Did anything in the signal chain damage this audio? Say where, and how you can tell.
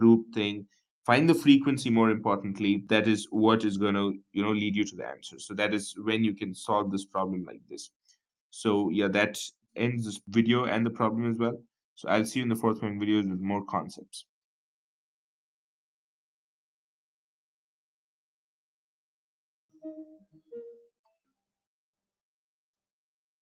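Yes, call processing damaged it: the audio was cut by the noise suppressor at 5.15 to 5.4 s, 7.45 to 7.74 s and 20.18 to 20.5 s, sinking by about 16, 18 and 14 dB for a fraction of a second each. The suppressor misjudged these passages as noise and attenuated them. Unlike a network dropout, the sound never goes fully silent or clicks, and onsets pass through while sustained and decaying parts are pulled down.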